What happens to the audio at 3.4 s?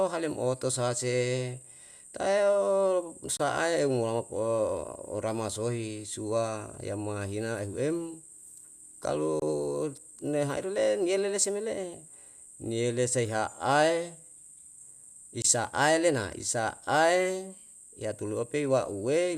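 Right around there, from 3.37 to 3.40 s, the speech drops out for about 26 ms. That's a gap at a join of encoded pieces. The audio seems to have been encoded in separate chunks and stitched together without trimming, so the encoder's start-up delay and its end-of-chunk padding both stay in as silence. You hear a brief hole with edges smeared by the codec, and then the speech resumes right where it stopped.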